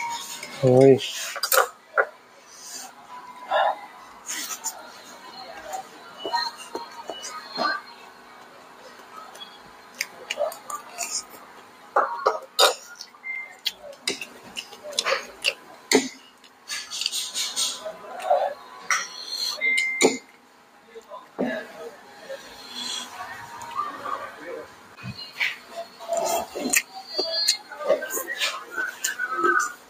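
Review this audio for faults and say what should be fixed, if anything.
A speech-oriented noise suppressor is applied to music or sounds throughout, treating sustained content as noise; gain swings of around 10 dB make held material pump and thin.

Sound is cut by the noise suppressor at 1.73–14.38 s, 15.56–16.68 s, 20.22–22.22 s and 24.66–27.71 s, sinking steady passages by about 6 dB while attacks pass.

To prevent this, bypass the noise suppressor or switch it to a music mode for non-speech sources.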